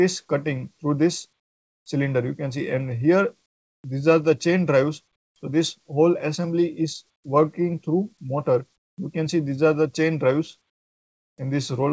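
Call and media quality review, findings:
Comfort noise in place of the background, 3.46–3.84 s, 5.16–5.36 s, 7.16–7.24 s, 8.78–8.98 s. Background detail gives way to steady featureless hiss, about 14 dB and 11 dB quieter at the second and third, about level at the first and last. Likely DTX on a G.722 path (nothing above 8 kHz): sender stops during silence, receiver synthesizes shaped noise until audio resumes.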